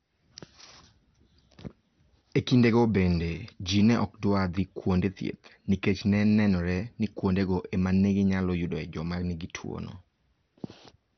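Throughout the speech, nothing reaches above 6.1 kHz. The sound is dull, with a gurgling, granular grit. The likely cause is heavy MP2 compression, which fits a rate near 48 kbps. Starved of bits, upper sub-bands switch off and remaining bands are coarsely quantised.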